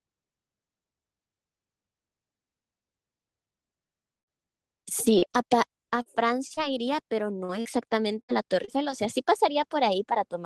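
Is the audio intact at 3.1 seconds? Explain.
Yes, at 3.1 seconds the speech is intact, with no dropout, glitch or distortion there beyond the ordinary coding texture of the call path it passed through.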